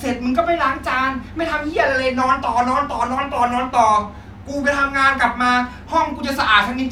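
No technical faults can be heard anywhere in the speech recording; the signal stays continuous and steady throughout.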